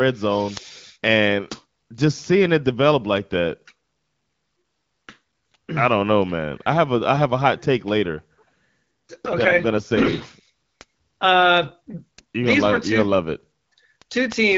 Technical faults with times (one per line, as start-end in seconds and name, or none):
9.13-11.72 AMR rate drop